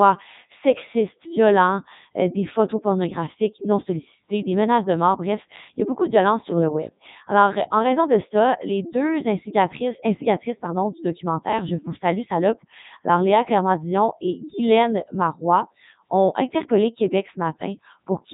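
The speech has passed through a Codec 2 vocoder throughout: only pitch, voicing, energy and a spectral envelope survive, which fits its top 3.2 kbit/s mode. Sine-wave resynthesis replaces the real waveform, leaving heavily robotic, buzzy speech with nothing above 3.8 kHz.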